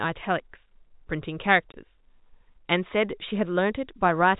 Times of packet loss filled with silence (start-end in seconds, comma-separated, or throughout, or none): 1.72-1.74